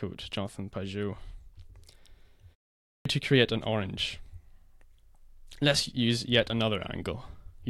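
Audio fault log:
2.87–3.05 s, clipped start after a pause: after about 0.4 s of silence the output wakes late, swallowing roughly 184 ms, so "to create an orange" begins abruptly.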